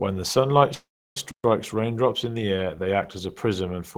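Right after "the sunlight", at 0.74 s, there's a call audio freeze running to 1.17 s. The last bit of sound gets stretched into a short buzzy tail that dies away, and most of that 0.43 s is silence. That's likely packets held up in transit so the jitter buffer ran dry and the receiver padded the gap. When the audio resumes it picks up exactly where it left off, so nothing's lost, but everything after lands about 0.42 s later.

Then at 1.31 s there's a playback stall. The sound just cuts out dead for about 130 ms, to 1.44 s, and comes back with "raindrops in the air". There's no fading tail this time, just an abrupt drop into silence. That's likely the player running short of data or its thread getting blocked for a moment, so the output simply stopped until it caught up.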